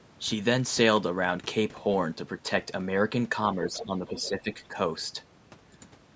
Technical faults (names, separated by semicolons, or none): other side's voice leaking through; speech suppressed in double talk